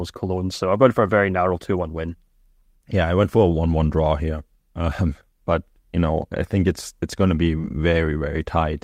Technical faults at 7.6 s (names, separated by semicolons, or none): short concealed packet loss